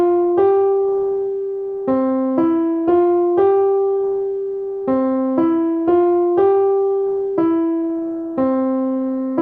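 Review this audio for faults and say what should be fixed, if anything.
Nothing here needs fixing; I listened all the way through and didn't hear a single problem worth flagging.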